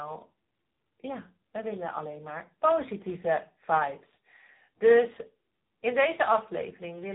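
Speech, with two faults running through the whole clip. The first is a filter restarted on every block. The filter loses its state and starts each block from silence, so every block opens with a small transient. These stack into a steady buzz at 345 Hz that rises and falls with the speech level, which fits a 128-sample block. The second is the AMR narrowband mobile codec. Nothing above 3.8 kHz survives, so the speech sounds muffled and phone-like. The codec rebuilds speech from a vocal-tract model driven by sparse pulses. Its damage is plainly audible as a buzzy, synthetic quality, which points to a low AMR-NB bitrate of about 8 kbps.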